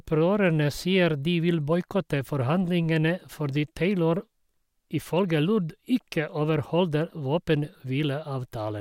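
A recording of speech, with no technical fault to be heard in it. Nothing in the audio calls for a time or a cause to be pointed out.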